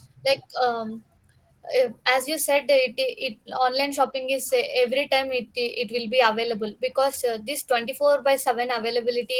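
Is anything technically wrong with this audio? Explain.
Yes, the speech carries Opus voice compression damage throughout. The speech sounds hoarse and slightly robotic, which fits a low bitrate near 16 kbps. The lower band is coded with linear prediction and a coarse excitation, and a thin transform layer above 8 kHz. A spectrogram would show smeared harmonics and a patchy upper band that changes in 20 ms blocks.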